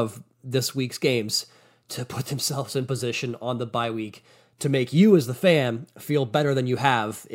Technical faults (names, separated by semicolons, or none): none